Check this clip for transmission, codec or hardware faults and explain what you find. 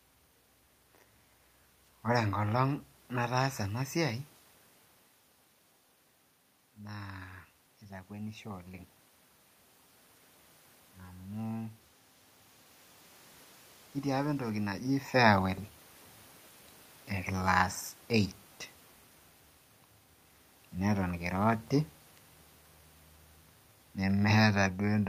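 One processing fault stands out in this speech clip, an automatic gain rise. The talker shifting position near 4 s and 14.5 s and the steady room noise belong to the recording itself.

Automatic gain rising, 6.87 to 8.95 s: the input level fell by about 11 dB, and the automatic gain control responded by lifting its gain by about 5 dB over roughly two seconds. Because the whole signal is amplified, the voice and the room noise swell upward together in a slow, even ramp rather than a sudden jump.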